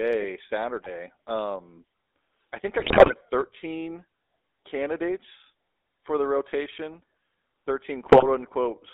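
A buzzy, gravelly roughness runs through the whole speech clip, and the band is squeezed to about 300 Hz to 3.7 kHz. This is the GSM full-rate codec. It models the vocal tract and drives it with sparse, regularly spaced pulses, which fits a 13 kbps full-rate link.

Three bursts of squawking, popping and gargling break in: from 0.82 to 0.89 s, from 2.80 to 3.13 s just after "i think i", and from 8.06 to 8.25 s. These are GSM bit errors. Flipped bits corrupted the decoder's filter, pitch or gain values, warping the spectrum and level frame by frame.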